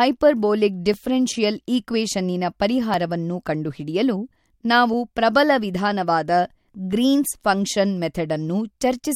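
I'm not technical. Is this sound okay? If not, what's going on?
No. The speech has periodic USB or driver dropouts. About every 2 seconds, from 0.94 s to 8.92 s, a few milliseconds of sound are skipped. Something on the computer briefly blocks the audio connection. Each gap that falls on speech is heard as a regular tick.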